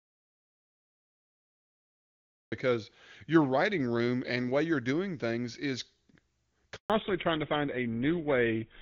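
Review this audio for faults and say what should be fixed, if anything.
Audio dropout to silence, from the very start of the clip to 2.52 s. The speech is already missing when playback begins and then cuts in mid-flow at 2.52 s. The gap is silent with no room tone, so the input itself was absent, not just quiet. The likely cause is a lost input, such as a disconnected device, a failed link or a mute left on, while the recorder kept writing silence. Whatever was said in those first two and a half seconds is unrecoverable. To prevent it, confirm that the input is live and unmuted before recording starts, and monitor levels so that a dead input is flagged immediately.

Handover gap, 6.76 to 6.90 s. The speech fades out within a few tens of milliseconds and stays silent for 140 ms. This is the signature of a call being moved between networks while no speech frames arrive during the switch. 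Those 140 ms of speech are lost, not delayed. To prevent it, capture calls over a stable connection, or use a setup that holds the call on one network while recording.

Fallback to narrowband, from 6.90 s to the end. Before this point the call has the full, airy top end of HD Voice, which points to AMR wideband running at a high rate. After the handover, nothing remains above 4 kHz, and the speech turns dull and rougher. That fits a drop to an older codec such as GSM full rate, which cannot carry the upper band at all. To prevent it, keep both ends of the call on networks and devices that sustain HD Voice, so the call is not renegotiated down to narrowband.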